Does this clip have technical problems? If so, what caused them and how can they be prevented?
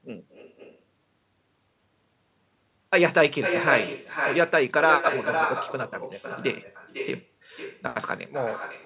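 Yes. An echo with no canceller runs through the whole speech clip. Every phrase is followed, roughly half a second later, by a copy about 6 dB quieter that sounds thinner. The far end is playing the call through a loudspeaker, and its microphone picks that sound up and sends it straight back with nothing removing it. On a waveform, each burst of speech is trailed by a smaller duplicate envelope. On a spectrogram, every syllable pattern reappears fainter and shifted later in time, all of it below the 4 kHz ceiling of the narrowband call codec. Turning on acoustic echo cancellation at the far end, or having that listener use a headset instead of a loudspeaker, would prevent it.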